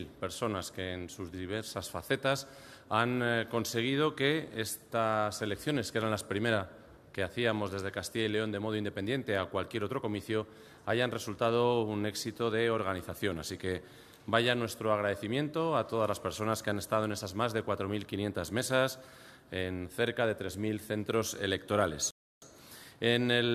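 At 22.11 s the audio drops to silence for about 0.31 s, then picks up at exactly the point where it stopped. This is a rebuffering stall. The player ran out of downloaded audio and paused until more arrived. Nothing is missing. About 312 ms is added.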